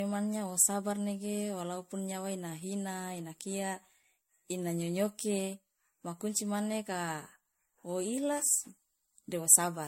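From start to finish the speech has a swirly, watery smear, with a hollow, scooped-out tone and softened consonant attacks, and nothing above about 16.5 kHz. This is generation loss, likely from the MP3 audio at 64 kbit/s being decoded and re-encoded about four times. Each pass re-quantises on a shifted frame grid, so the noise and spectral holes pile up, and the result sounds more degraded than a single 64 kbit/s encode would.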